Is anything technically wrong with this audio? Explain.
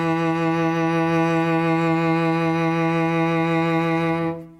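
No, nothing in this music clip points to a technical fault. There is no audible problem anywhere in the recording.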